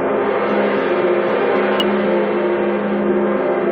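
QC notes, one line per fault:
1.80 s, damaged data in a compressed stream: a brief glitch as the decoder misreads corrupted frames, loses sync and hunts for the next header.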